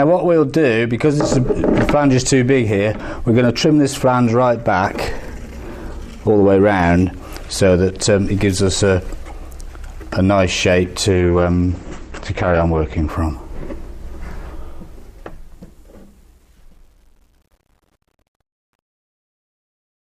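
At 11.09 s the adaptive stream switched to a lower bitrate for two seconds, until 13.09 s. The quality changes abruptly, with no gap: nothing remains above 8.6 kHz, and the treble turns dull, which points to a drop from about 64 to 12 kbit/s Opus.

From 14.34 s a fade stage truncates without dither, which fits about 9-bit resolution, producing truncation distortion on the fade. The fade-out itself runs from about 14.3 s to 20.1 s, but its quiet tail turns gritty, and from 15.91 s to the end it is at its worst.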